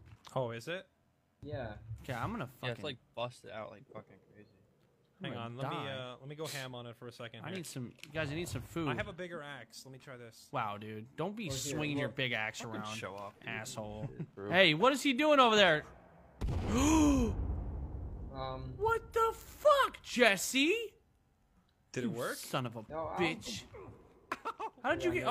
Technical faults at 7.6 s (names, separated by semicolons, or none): none